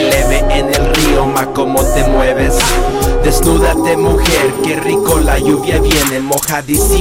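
A stage in the signal chain was driven roughly 6 dB beyond what it could pass, so throughout the whole 7-second clip the loudest parts of the waveform are sliced off flat. This is hard clipping, and around one sample in twenty was cut off at that stage's limit. Those squared-off peaks generate harmonics high above the original content, heard as a gritty crackle on the peaks.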